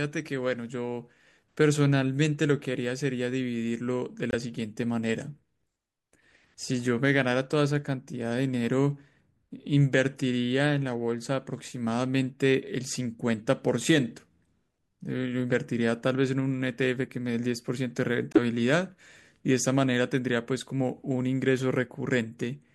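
Speech, interrupted twice by corrupt frames that were muted. At 4.31 s the sound drops out abruptly for about 34 ms. At 18.33 s a longer gap of 50 ms cuts in just as sharply. Damaged bits in the compressed stream made the decoder reject those frames, and the player filled the space with silence. The first hole fits one lost frame, the second two in a row. Timing around both gaps is kept.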